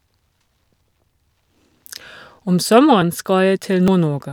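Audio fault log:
0.86 s, 3.02 s and 3.88 s: dropped buffer (overrun). At each point the speech jumps forward, with no gap of silence, because a stretch of samples has simply vanished and the audio on either side is butted together. The losses are roughly 50 ms, 20 ms and 70 ms, so the last is the longest skip. The likely cause is the recording software falling behind and the hardware overwriting its buffer before it was read.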